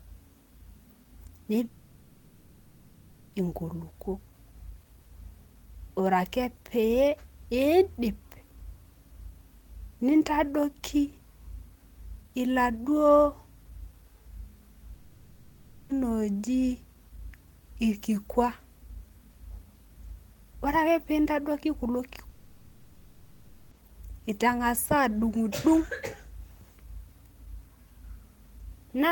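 At 1.65 s the speech gives way to a smeared, buzzy continuation of the last sound that fades out, running until 3.35 s. The same happens at 14.93 to 15.91 s and again at 22.29 to 23.73 s. It's likely a long network dropout each time: nothing arrived for one to nearly two seconds, the receiver papered over the whole hole with that decaying filler, and the speech resumes with the missing stretch simply gone.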